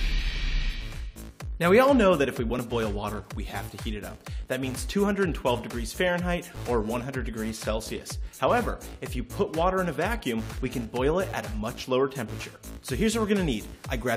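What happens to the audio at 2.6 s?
At 2.59 s there's a tiny skip where the waveform jumps. That's an overlap between stream segments: two roughly 4-second segments claim a few milliseconds of the same time, so the player trims that stretch away, even though the audio there wasn't actually duplicated.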